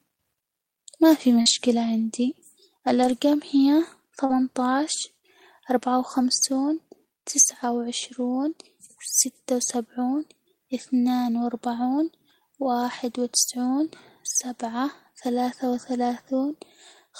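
Just after "ما في", at 1.41 to 1.48 s, a short concealed packet loss covers about 40 ms of sound that never arrived in time. The decoder extended the preceding sound from its pitch or as shaped noise, then crossfaded back, which gives a brief smear. On a spectrogram the harmonics run on flat and slightly blurred. In the waveform the cycles repeat too regularly before blending back. The same thing happens at 4.26 to 4.31 s, filling about 37 ms.

Lost packets rebuilt from error correction follow. At 1.46 to 1.52 s, about 40 ms was played from the low-bitrate copy carried by the next packet. At 3.00 to 3.14 s about 80 ms was rebuilt, which fits a run of four 20 ms packets. Shorter patches fall at 4.29 to 4.31 s, 6.53 to 6.59 s, 9.67 to 9.69 s, and 12.81 to 12.83 s just before "وتسعون سبعة ثلاثة". None leaves a gap. Each patch sounds rougher and grainier. On a spectrogram it shows as a short block of coarser, noisier texture with less distinct harmonics.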